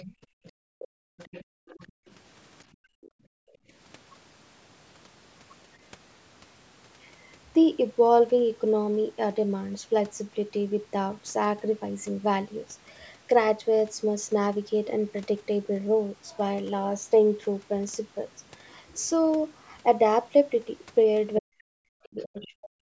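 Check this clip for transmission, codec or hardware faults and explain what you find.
The echo canceller on this call fails in three ways: residual echo leaks through, the room background is gated, and the talker's speech is suppressed during double talk.

Other side's voice leaking through, at 0.0 to 2.14 s, 3.03 to 3.11 s, 21.35 to 21.39 s and 22.2 to 22.48 s: the canceller likely leaves part of the loudspeaker echo in the microphone signal, so a faint second voice sits well below the talker.

Background gated by the echo canceller, at 0.17 to 2.07 s and 2.71 to 3.73 s: while playback runs, the canceller clamps the microphone, and the room tone drops by about 35 to 36 dB before returning.

Speech suppressed in double talk, from 21.41 s to the end: with both sides talking, the canceller likely cannot separate the talker from the echo and turns both down, cutting the talker by up to about 40 dB.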